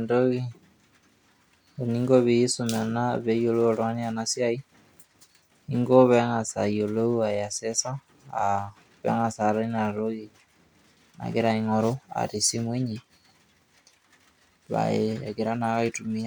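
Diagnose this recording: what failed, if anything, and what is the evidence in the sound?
Nothing failed; no stage in the chain leaves an audible fault anywhere in the speech.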